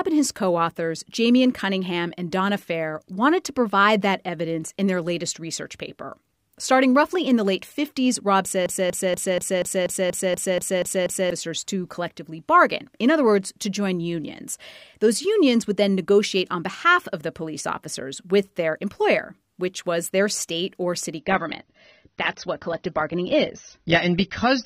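From 8.66 s to 11.31 s the speech catches in a broken-record loop: a 240 ms fragment repeats exactly, back to back, eleven times, before the audio resumes on "to collectively bargain in". The cause is likely a player or stream stall that kept re-sending the last buffered chunk, and whatever speech should have filled those 2.6 seconds is gone rather than delayed.

At 21.19 s, right after "their state or city", the sound drops abruptly to a thinner, duller quality that lasts to the end of the clip. This is an adaptive stream at a lower bitrate: nothing remains above about 6.3 kHz, and codec artefacts rise. The change is consistent with an AAC stream stepping down from around 96 kbit/s to 24 kbit/s, with no gap at the switch.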